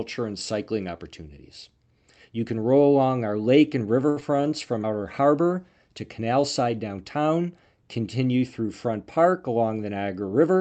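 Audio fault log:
4.09–4.18 s, short stall from a late packet: just after "our lake and river" a sound is held too long, with a faint buzzy dip. A packet arrived late, the jitter buffer ran dry, and the receiver stretched the last sound for 68 ms, then resumed where it stopped, so nothing is lost but delay grows by 68 ms.
4.20–4.23 s, short concealed packet loss: right after that stall comes a brief smear or wobble, and part of a short sound can drop out. About 40 ms of audio never reached the decoder in time. The receiver bridged the gap with a 7 ms continuation of the last sound, and the delay came back down by roughly 30 ms.
4.31–4.50 s, jitter buffer slow-down: still just past "our lake and river", the speech drags at 82% speed while the pitch stays unchanged, leaving sounds drawn out. Its reserve was low, so the receiver repeated single pitch periods or bits of pauses many times in a row, adding 42 ms.
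8.97–9.57 s, jitter buffer speed-up: the speech briefly hurries at 112% speed at the same pitch. The jitter buffer held more audio than its target, likely after delayed packets arrived together, so the receiver trimmed short pieces of one or a few pitch periods repeatedly, removing roughly 70 ms to cut the delay.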